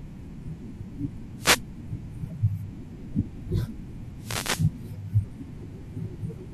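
A short swish of static cuts across the speech from 1.37 to 1.62 s, and a longer burst follows from 4.17 to 4.71 s, lasting about half a second. Both are wireless microphone noise hits. The analogue FM radio link between microphone and receiver faded as reflected signals cancelled the direct one, so receiver noise surged up.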